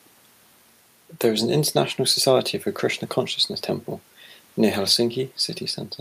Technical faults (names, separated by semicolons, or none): none